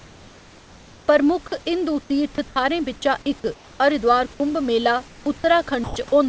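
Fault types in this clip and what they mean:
Comfort noise in place of the background: From 0 to 1.08 s, 3.54 to 3.80 s and 5.08 to 5.26 s, the real room background between phrases gives way to a steady, featureless hiss about 2 to 3 dB quieter. This is likely because the sender paused transmission and the receiver synthesised noise instead. A spectrogram shows these stretches as smooth, uniform texture with no detail. The waveform shows an even, flat noise floor that steps down slightly.
Sound dropped by the voice detector: At 2.36 to 2.38 s, 2.48 to 2.56 s, 4.34 to 4.40 s and 5.84 to 5.96 s, speech was likely taken for background, so transmission stopped. Short pieces of speech, up to 80 ms, vanish, and steady noise fills each gap until sound returns. On the waveform, speech envelopes cut abruptly to a low, even band. On a spectrogram, harmonic structure breaks off into a plain noise smear.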